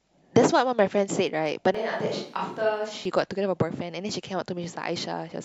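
Speech, with a switch to a distant microphone from 1.75 to 3.05 s, likely from the close mic dropping out. The voice turns hollow and roomy, roughly 10 dB quieter. The waveform steps down abruptly, and the spectrogram thins in the bass as the noise floor rises.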